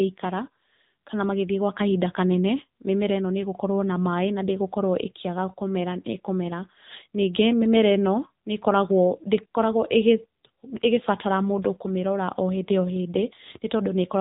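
From start to finish, the speech carries AMR narrowband mobile codec damage. Nothing above 3.8 kHz survives, so the sound is dull and boxy. The low bitrate, about what a 7.95 kbps mode would give, makes the voice plainly buzzy and synthetic.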